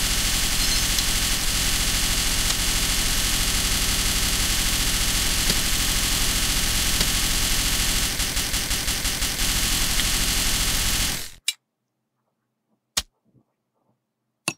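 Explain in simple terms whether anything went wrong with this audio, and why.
A system hang loop happens twice, from 3.58 to 4.44 seconds and from 8.19 to 9.39 seconds. Each time the computer briefly froze, but the sound hardware kept replaying the last 0.17 seconds it held, which fits an 8192-sample buffer. That piece repeats 5 times in the first spot and 7 in the second, almost six times a second, giving a choppy machine-gun stutter. Around a second of real audio is missing after each freeze.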